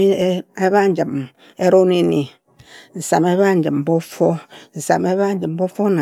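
Nothing in this recording of speech stands out as a technical fault, so there's no moment to point to and nothing that went wrong along the way.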